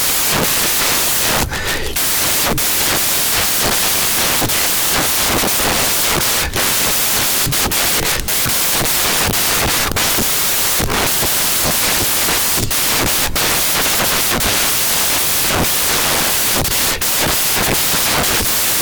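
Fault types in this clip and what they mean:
Samples built from the wrong bytes: across the entire clip, each sample's bytes are assembled in the wrong order or at the wrong offset, so the rapidly varying low-order bits land in the most significant position and the speech comes out as loud, harsh broadband noise. Unlike ordinary background hiss added to the signal, this noise is the signal itself, scrambled.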